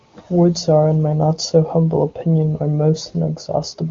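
No technical faults are audible.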